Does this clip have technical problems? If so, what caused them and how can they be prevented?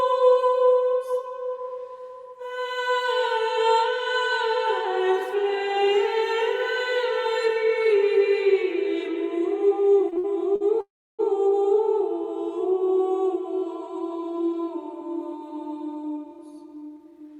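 Yes. From 10.09 to 10.63 s, packets kept arriving late, so the jitter buffer ran dry four times. Each stall was filled by stretching the last sound, 153 ms in all with the longest at 61 ms, producing repeated stalls (stutter). A larger, adaptive jitter buffer prevents this.

From 10.81 to 11.21 s, packets were likely held up in transit, emptying the buffer. The last sound is carried on for 380 ms, fading to silence for about 310 ms, before resuming where it stopped: a call audio freeze. A steadier, less congested network path prevents it.

From 14.38 to 17.35 s, the buffer held more audio than it aims for, and the receiver cut about 0.3 s of short pitch-period pieces. This jitter buffer speed-up plays the sound at 109% speed, same pitch, noticeably hurried. Gentler, more gradual delay reduction prevents this.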